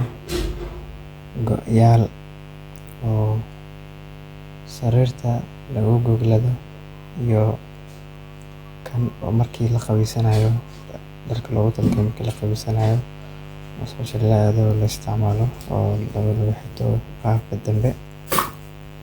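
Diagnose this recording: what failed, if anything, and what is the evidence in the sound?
A steady, raspy buzz sits under the speech for the whole clip, roughly 20 dB below it. This is mains buzz entering at the analogue wiring: sharp switching spikes on a 50 Hz supply, twice per cycle, spray harmonics up into the kilohertz range.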